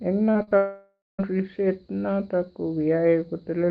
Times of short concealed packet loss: 0.31-0.53

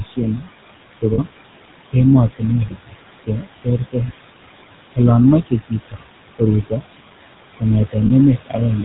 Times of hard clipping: none

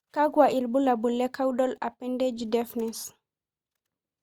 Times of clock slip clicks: 0.42-3.95

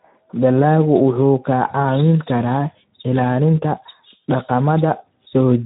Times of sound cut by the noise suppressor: none

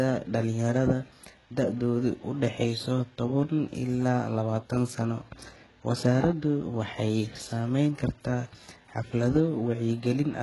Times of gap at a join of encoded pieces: none

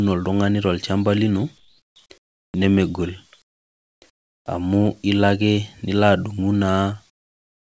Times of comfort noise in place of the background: 1.58-2.54, 3.42-4.46, 7.10-7.60

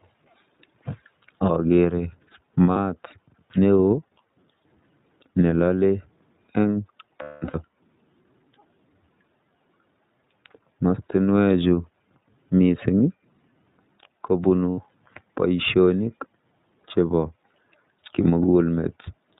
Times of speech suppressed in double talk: none

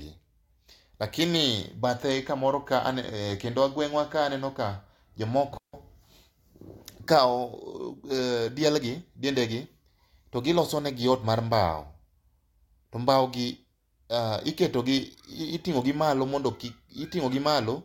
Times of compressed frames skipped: none

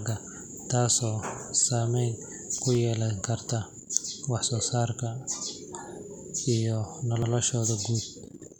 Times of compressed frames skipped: none

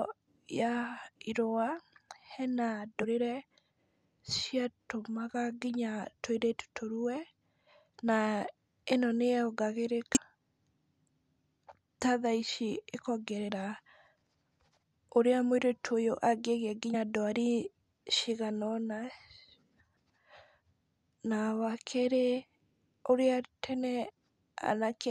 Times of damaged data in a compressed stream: 3.02, 10.15-10.17, 16.93, 24.10

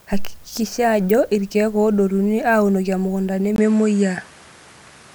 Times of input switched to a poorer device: 3.56-5.14

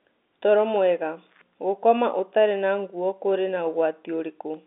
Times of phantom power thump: none

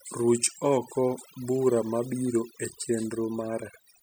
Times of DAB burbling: none

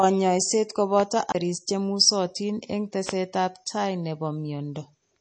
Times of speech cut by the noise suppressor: none

